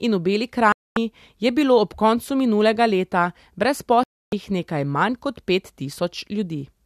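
At 0.72 s the speech cuts to silence. It returns at 0.97 s on "je bilo ob koncu". This is a digital broadcast dropout. The receiver stopped getting frames it could decode and muted its output. Roughly a quarter second of programme is gone, which fits about ten lost frames. A second dropout runs from 4.03 to 4.33 s, a hole of about 290 ms. Sound resumes with "nekaj manj kot pet". Nothing sent during either gap survives.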